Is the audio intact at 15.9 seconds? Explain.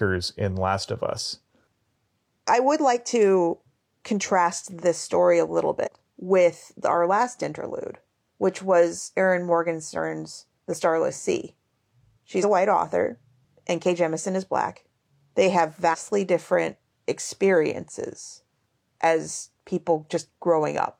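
No. Between 15.89 and 15.95 s, just before "different experiences as", compressed frames are skipped. About two 43 ms frames go unplayed, so the speech jumps ahead roughly a tenth of a second.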